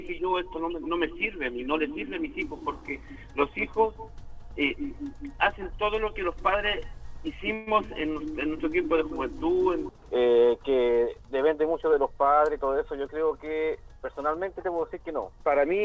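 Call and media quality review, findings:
Call audio freeze, 7.54 to 7.69 s: the sound smears into a short fading buzz for about 0.13 s, then picks up where it left off with nothing lost. Likely a jitter buffer underrun from late packets, with the gap concealed.

Jitter buffer speed-up, 12.11 to 13.31 s: the audio runs about 10% fast at the same pitch and sounds hurried. The buffer is trimming pitch-period slices, around 150 ms in total, to drain excess delay. Top end stops near 8 kHz, consistent with a G.722-style wideband path.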